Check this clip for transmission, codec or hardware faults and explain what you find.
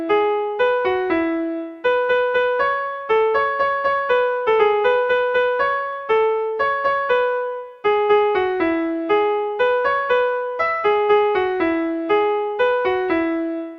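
Clock slip clicks run through the clip, from 0.11 s to 13.69 s. Faint ticks recur about once a second, roughly fifteen in all. Each marks a single sample dropped or repeated. The likely cause is two unsynchronised clocks differing by around 20 ppm.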